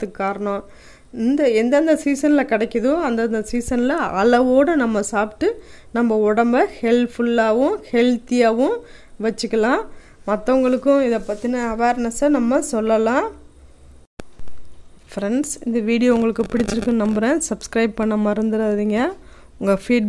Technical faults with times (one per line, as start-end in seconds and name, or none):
none